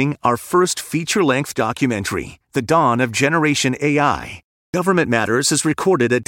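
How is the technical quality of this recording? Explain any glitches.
There is one glitch, a clipped start after a pause at 4.7 s. Speech resumes after a pause of about 0.32 s, and its first 39 ms is missing, so the sound begins abruptly with its opening cut away. This fits an output path that idles during silence and needs a moment to wake or relock, swallowing the onset. Unlike muted pauses, which only drop the background between phrases, this removes part of the speech itself.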